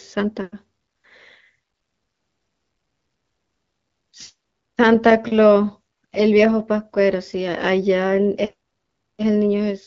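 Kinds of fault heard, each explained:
No faults heard; the speech carries the light coding texture expected of AMR wideband (HD Voice) at 12.65 kbit/s.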